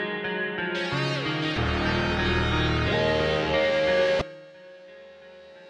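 Damaged data in the compressed stream at 1.54 s and 4.18 s: corrupt frames make the decoder lose sync and resync, leaving brief blips about 30 ms long.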